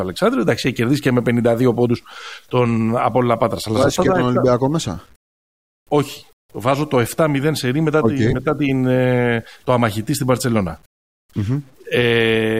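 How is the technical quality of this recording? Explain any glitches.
The speech carries a gritty, grainy distortion from start to finish. Low bit depth without dither is the likely cause: truncating samples to about 9 bits leaves rounding error that tracks the signal, roughly 40 dB below it. Unlike steady hiss, this grain rises and falls with the speech, roughening quiet passages, and falls away in silence.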